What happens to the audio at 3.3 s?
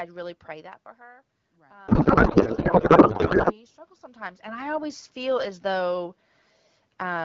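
At 3.3 s the speech is replaced by a codec payload misread, running from 1.87 to 3.59 s. The decoder reads the AMR frames with their bits packed differently from how they were sent, which fits octet-aligned data read as bandwidth-efficient. The result is garbled noise and warble that barely follows the speech. Unlike low-bitrate codec roughness, which keeps the speech recognisable, this breaks in and out abruptly.

Underneath, automatic gain rising is under way from 0.56 to 4.52 s. The input fell by about 19 dB, and the gain control is slowly lifting the level by about 8 dB. The background swells along with the voice, which is what separates this from a talker simply moving closer.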